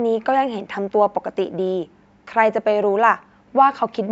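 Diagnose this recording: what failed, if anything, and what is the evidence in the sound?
Nothing stood out on listening to this speech recording, at any stage from the microphone through to playback.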